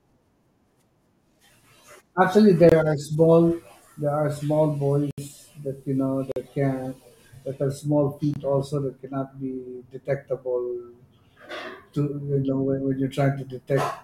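Speech, broken by four blocks of digital silence at 2.69 s (23 ms), 5.11 s (70 ms, before "that you know"), 6.32 s (46 ms, before "can that are small") and 8.34 s (23 ms). These are hard cuts to silence rather than faded or concealed dropouts, and their lengths fit missed 1024-sample output buffers.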